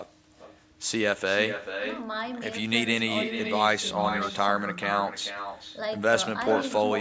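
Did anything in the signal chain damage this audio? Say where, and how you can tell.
Yes: echo with no canceller at the call's far end, throughout. Every phrase returns about 0.4 s later, about 8 dB quieter and thinner, a distinct delayed copy rather than smooth room reverb.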